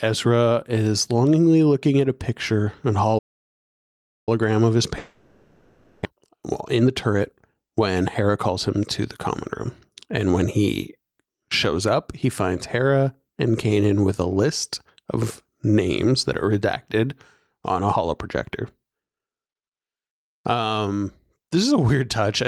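At 3.18 s the speech cuts out mid-flow and stays silent until 4.29 s, about 1.09 s, before carrying on. This is a playback stall, likely caused by the player running short of data or its output thread being held up, so nothing reached the output until it recovered.

From 4.98 s to 6.07 s the speech gives way to a buzzy, hissing continuation of the last sound, fading over the whole 1.07 s without reaching true silence. When speech returns, roughly 600 ms of it is gone. This is a long network dropout, likely from a stretch in which no packets arrived. The receiver filled the gap by extending what it last had rather than leaving it empty. The audio resumes further along, and the listening delay has grown by around half a second.

Straight after, from 6.09 s to 9.01 s, the talker sounds hurried, running about 11% fast while the pitch stays put. From 9.69 s to 11.35 s a milder rush follows at about 5% fast. 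Both are jitter buffer speed-up. With the buffer holding more audio than its target after the dropout, the receiver trimmed many tiny pitch-period slices to claw back the delay. That removed roughly 0.3 s in the first stretch and about 0.1 s in the second.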